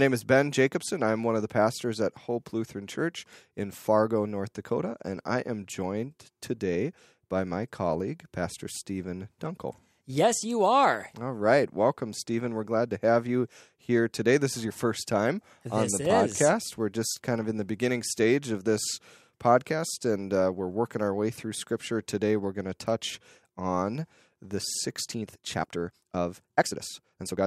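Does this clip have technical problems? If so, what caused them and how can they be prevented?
Yes. A time-stretched section runs from 24.99 s to the end: the pace jumps to about 1.77 times normal while the pitch stays put, so the speech turns rushed. This is likely from software squeezing the passage to fit a length by dropping short slices. Keep the original timing, or trim or re-edit content to fit rather than stretching it.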